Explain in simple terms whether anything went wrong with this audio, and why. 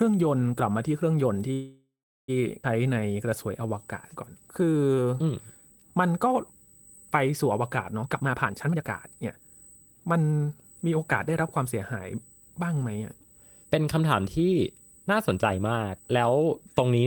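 Yes, several things went wrong in this speech recording.

USB whine, throughout: a steady high-pitched tone at 8 kHz runs under the whole clip. Electrical noise from the USB connection is leaking into the audio path.

Call audio freeze, 1.53 to 2.30 s: the sound stalls and fades, with a stretch of silence, for about three quarters of a second. The likely cause is delayed network packets. It then resumes with nothing lost.

Skip ahead, 2.62 to 2.65 s: playback suddenly jumps forward, dropping roughly half a second of speech. The two sides are stitched almost directly together.

Jitter buffer slow-down, 2.84 to 6.52 s: speech runs at 88% speed but keeps its normal pitch, adding about 0.44 s. This happens because tiny pieces are being repeated to rebuild a reserve.

Jitter buffer speed-up, 8.03 to 10.88 s: speech runs at 126% speed, sounding hurried but keeping its pitch. Roughly 0.7 s of small pieces are removed to cut the delay.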